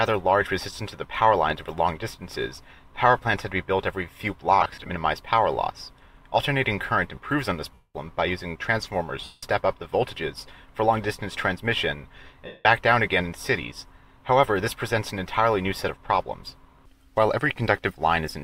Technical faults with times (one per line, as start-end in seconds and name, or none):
4.61-4.90 lost LE Audio frames
7.74-7.95 lost LE Audio frames
9.24-9.43 lost LE Audio frames
12.46-12.65 lost LE Audio frames